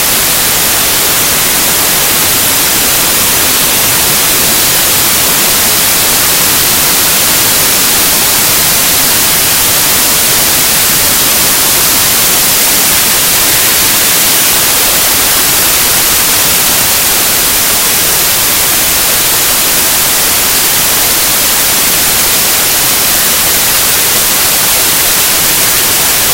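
Samples built from the wrong bytes affect the whole clip, from start to finish. The reader assembles each sample's bytes incorrectly, whether shifted by one byte, in reversed order or at the wrong alignment, so the rapidly fluctuating low-order bits end up as the most significant part of every value. The result is loud, harsh broadband noise, close to white on the loud sounds.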